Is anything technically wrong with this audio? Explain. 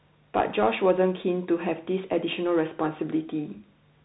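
Yes. Throughout the speech, the sound is boxed-in and dull, with nothing above about 3.8 kHz. S sounds come out scratchy, a grainy hiss sits under the voice, and loud, bright moments break up. This is the Bluetooth CVSD headset codec, and the damage is plainly audible. The codec sends a single up-or-down bit per sample at a rate that fits 64 kbps, adapting its step size as it goes. Fast, loud high-frequency movement outruns that step, which causes the distortion, and the constant one-bit stepping creates the hiss.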